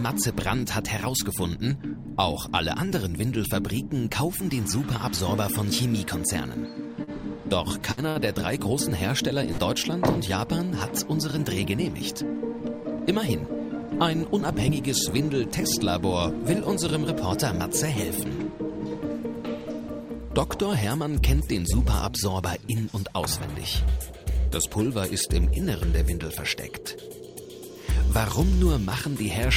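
A short stall from a late packet occurs at 7.03 to 7.10 s. A packet had not arrived when it was due, so the jitter buffer ran dry and the receiver stretched the last sound for 40 ms until it turned up, then carried on from the same point. Nothing is lost, but the sound is briefly held with a faint buzz or dip, and everything after it plays 40 ms later.

A burst of packet loss follows at 7.92 to 8.00 s. Consecutive packets never arrived in time, so the receiver extended the last sound for about 51 ms while fading it down, producing a held buzz or dying hiss. When playback resumes, 60 ms of the audio has been skipped entirely.

A second short stall from a late packet, at 8.09 to 8.18 s, behaves like the first but is longer: 64 ms of stretched sound and a 64 ms increase in delay.

A second burst of packet loss at 9.51 to 9.61 s repeats the pattern, with 64 ms of fading fill and 60 ms of audio missing when it resumes.

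A jitter buffer speed-up runs from 13.67 to 14.76 s. The buffer was holding more audio than it aimed for, so the receiver trimmed short pitch-period slices again and again, removing roughly 40 ms in total. The sound plays at about 103% speed with unchanged pitch.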